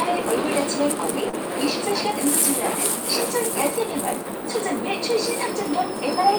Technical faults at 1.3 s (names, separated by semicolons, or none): short stall from a late packet